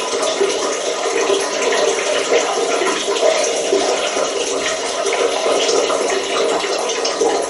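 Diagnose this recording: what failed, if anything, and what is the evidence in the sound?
The codec stage shows damage throughout. The sound has a watery, swirling texture with smeared attacks. That points to a bitrate near 48 kbps. MP3 compression is the likely cause: starved of bits, the encoder cuts the treble and zeroes weak frequency lines frame by frame.

There is a single sharp click at 0.59 s, a thin vertical line in the spectrum. It fits dropped samples, likely only about one, at the driver or buffer stage. The waveform jumps abruptly to a later value, far too brief to remove any audible sound.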